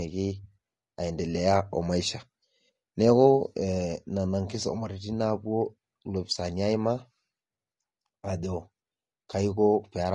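From start to finish the speech sounds rough and grainy, with a hiss filling the gaps between voice harmonics and a top band that sounds thin and partly synthetic. The likely cause is low-delay AAC compression of the AAC-ELD kind, which fits a bitrate around 32 kbps. Its very short frames resolve pitch poorly. Unlike steady background noise, the grain follows the voice, coming and going with each syllable.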